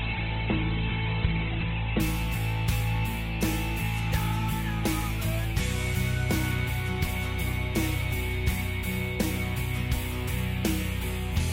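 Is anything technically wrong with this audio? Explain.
Yes. From 0.0 to 2.0 s there is an adaptive stream starting at a low bitrate: the player opened on a heavily compressed version, with nothing above 4.3 kHz and smeared codec artefacts, fitting a very low Opus rate. It then steps up to a better Opus 64 kbit/s version with no gap, unlike a dropout or a permanent low-pass filter.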